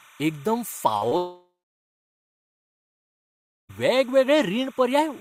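Timecode bleed runs through the whole speech. Linear timecode leaks in at roughly 30 dB below the speech, heard as a chirping warble between about 1 and 2 kHz. On a spectrogram it shows as two faint horizontal bands flickering at 29.97 frames per second.

Short concealed packet loss occurs at 0.97 to 1.03 s and again at 1.09 to 1.13 s. About 40 ms and then 20 ms of audio never arrived, and the extrapolated fill sounds like a brief smear.

From 1.17 to 3.71 s, the likely cause is a long network dropout. The last sound stretches on and fades for about a third of a second, then goes silent, a flat line on the waveform. Speech resumes without the lost stretch.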